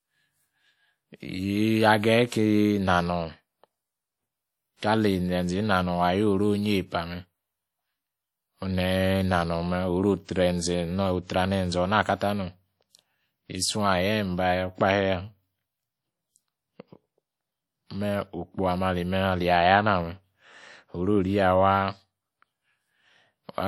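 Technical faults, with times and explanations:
Throughout, WMA compression: the speech rings and sounds washy, with a hiss that swells and fades with the signal, and nothing above 19.6 kHz. This is likely coarse transform coding spreading quantisation noise across long blocks, which fits a bitrate near 48 kbps.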